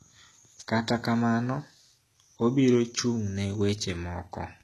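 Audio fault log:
Throughout, HE-AAC compression: treble sounds synthetic and gritty, s sounds metallic, nothing above 12.4 kHz; likely from a low bitrate, around 16 kbps, rebuilding highs by band replication.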